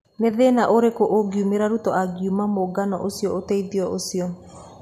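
Listening to the speech in this clip, nothing stood out as a technical fault at any point.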